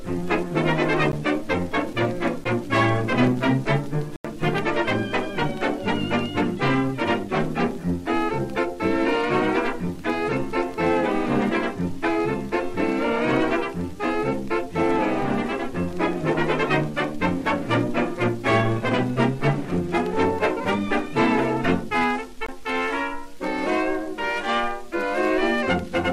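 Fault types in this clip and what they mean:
Block of digital silence: the signal drops to silence and returns with no fade. This is unlike a fade-out or concealed packet loss, which smooth or fill the gap. The clip has brief ticks at 1.12 s and 2.44 s (about 14 ms and 12 ms), an 85 ms hole from 4.16 to 4.25 s that fits a 4096-sample block, and a 21 ms gap from 22.46 to 22.49 s that fits a 1024-sample block.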